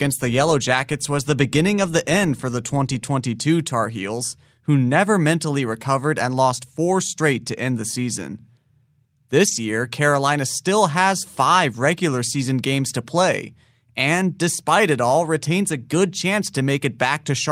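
Speech, with a lost packet rebuilt from error correction at 9.47–9.57 s: no gap, but about 60 ms sounds rougher and noisier, consistent with three packets replaced by low-bitrate copies.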